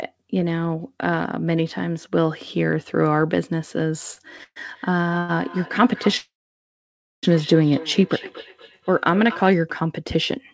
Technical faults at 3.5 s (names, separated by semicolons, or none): none